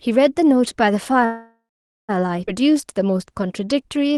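Speech heard through a call codec whose band stops near 12 kHz, fitting Opus at about 24 kbps, with three timing faults. From 1.25 to 2.11 s a call audio freeze stretches the last sound into a fading buzz or hiss, then about 0.48 s of silence. This is likely packets stalling until the jitter buffer ran dry. Unlike a skip, speech resumes exactly where it stopped. At 2.47 to 2.49 s a skip ahead joins two points almost seamlessly, dropping about half a second of speech rather than inserting a pause. From 2.60 to 4.13 s a jitter buffer slow-down repeats pitch periods to rebuild its reserve, adding 112 ms so speech plays at 93% speed. The pitch stays unchanged, unlike a slowed tape.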